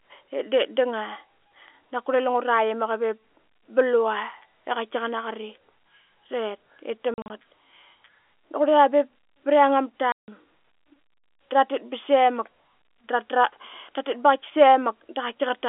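Speech heard through a narrow telephone band, chopped by hard-edged holes scattered from 7.14 to 7.3 s, just after "tet ip", and by a solid 160 ms dropout at 10.12 s. This is packet loss filled with silence, and the hole sizes fit lost 20 ms packets.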